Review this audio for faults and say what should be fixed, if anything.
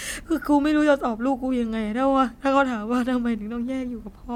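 Nothing needs fixing, as no faults are audible anywhere in the speech.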